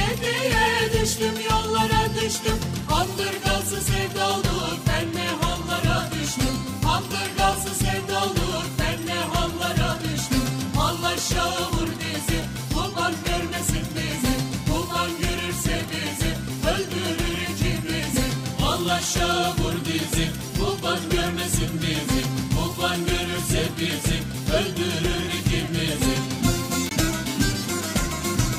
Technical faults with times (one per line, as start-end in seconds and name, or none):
26.89 CD skip